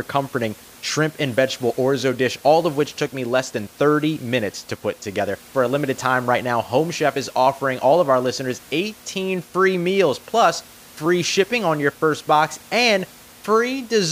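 Nothing stood out on listening to this speech recording, with only a low room noise sitting about 25 dB below the speech.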